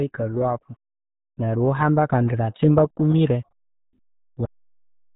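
From the first moment, the speech carries the RealAudio 14.4 codec sound. Nothing above 3.8 kHz gets through. The top of the voice is gone, so consonants lose their edge and everything sounds muffled. The damage is heavy. Vowels take on a gargly, bubbling texture as the coder struggles to rebuild the waveform from very little data. That thin, watery quality fits a dial-up-era rate of around 8 kbit/s.

At 4.45 s the clip has a cut-off end. The audio stops in the middle of a sound and drops straight to digital silence. There is no decay and no fade. The remaining buffers were never written out, so the waveform is chopped off at whatever value it held. The silence then runs to the end of the file. The break is abrupt and unnatural, with nothing trailing off.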